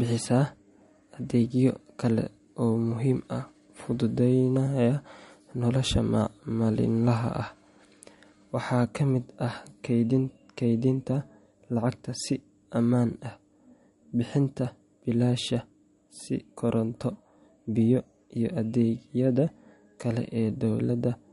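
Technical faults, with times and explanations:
Throughout, MP3 compression. The speech carries plainly audible watery, swirly damage, and nothing is heard above 11.2 kHz. The likely cause is an MP3 encode starved of bits, which fits a bitrate around 48 kbps. Short of bits, the encoder removes all treble above a fixed cut-off. It also drops weak frequency lines, and these flicker on and off between frames. That flickering creates the swirl, and the missing treble dulls the top end.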